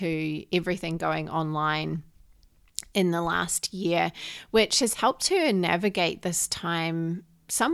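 At 4.93 s, just after "last year which has", the speech dips abruptly for about 55 ms, until 4.99 s. Then it recovers before "her navigate this". The level falls by about 6 dB for that short stretch, as a sudden hole rather than a fade. This is likely one channel drops out. One side of a stereo feed vanishes briefly. Once the two sides are summed to mono, shared content halves, giving that quick dip.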